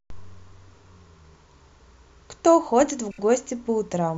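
From 3.10 to 3.19 s there are repeated frames. One compressed block of 26.1 ms plays three extra times, consistent with a single frame being duplicated. The speech stutters briefly. The clip gains 78.4 ms.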